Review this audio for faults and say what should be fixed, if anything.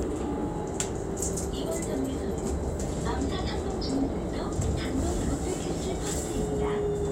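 There's DAB burbling at 3.83–4.83 s and again at 6.76–6.87 s. Weak reception let bit errors slip into the MP2 data, so individual sub-bands get short blips of noise. Better antenna placement or signal strength should fix it.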